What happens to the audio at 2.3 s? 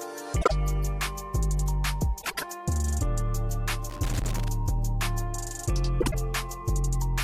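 A brief garbled flutter from 2.22 to 2.44 s: frames out of order, two adjacent blocks of about 78 ms played swapped.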